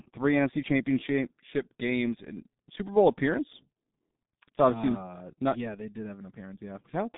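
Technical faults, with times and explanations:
Throughout, G.723.1 codec: the speech is squeezed into a narrow telephone band, with nothing above 3.7 kHz and little below 150 Hz, so it sounds muffled and boxy. The hoarse, rough texture and smeared consonants point to heavy low-bitrate coding, which fits a rate of about 6.3 kbit/s. The codec rebuilds speech from a coarse model refreshed only every 30 ms, so fast consonant detail blurs and the voice loses its natural grain.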